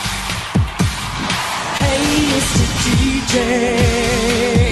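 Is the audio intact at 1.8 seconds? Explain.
No. Short concealed packet loss spans 1.77 to 1.82 s: 20 ms never arrived, so the receiver extended the preceding sound, leaving a brief smear.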